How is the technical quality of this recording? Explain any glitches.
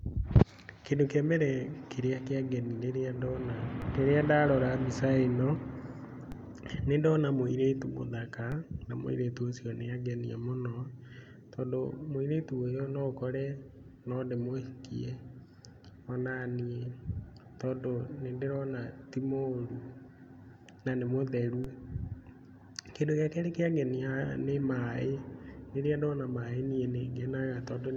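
The recording has one recurring glitch: four DC steps. At 3.82, 6.32, 8.52 and 21.64 s the waveform's zero line suddenly shifts by about -30 dBFS, then drains away through a 20 Hz high-pass. Each jump registers as a brief low thump beneath unchanged speech.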